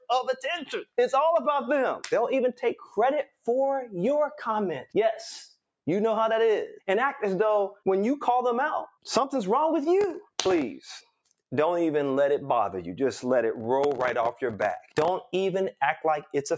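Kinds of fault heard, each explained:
Sound cut by the noise suppressor: the suppressor mistook parts of the sound for noise and pulled them down, by about 8 dB from 2.81 to 2.96 s and by about 20 dB from 3.25 to 3.47 s. These are smooth level sinks, not gaps, and nothing crackles.
Processor overload crackle: the processor kept missing the deadline for its very short buffers, around 1.5 ms each, and replayed stale audio with hard edges. It gives gritty tearing from 10.01 to 10.62 s and from 13.56 to 15.08 s. These are dense bursts, not a lone click.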